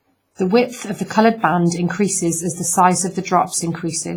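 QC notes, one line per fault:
throughout: WMA compression. The speech has a ringing, washy quality, with a hiss that rises and falls with the signal. Quantisation noise is smeared across long transform blocks, so it hangs around each sound instead of staying tight to it. Weak high detail drops out where lines get zeroed. The damage is heavy and sounds like a low bitrate, around 24 kbps. The likely cause is a simple WMA encoder using long blocks.
0.35 to 0.39 s: pre-echo. A short hiss arrives before a sharp attack, which then sounds softened and smeared. The noise lasts about 39 ms. The attack falls late in a transform block. The encoder spreads its noise evenly over that whole block, so noise sized for the loud onset also fills the quiet gap before it. It is heard as a brief wash leading into the hit.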